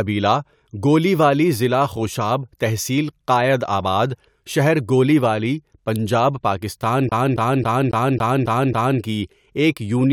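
A scratch on the disc is throwing the laser back one track at the same point on every rotation, so this speech recording gets stuck like a CD stuck on one turn. From 7.09 s to 9.01 s, right after "شہر گولیوالی پنجاب پاکستان", a 0.27 s slice repeats seven times, each pass broken by a brief mute at the jump, giving a fast, even stutter before the audio moves on to "کی ایک یونین".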